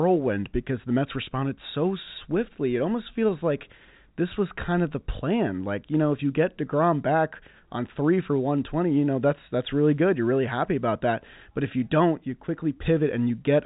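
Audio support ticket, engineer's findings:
No faults found; telephone-band speech, nothing above 3.8 kHz.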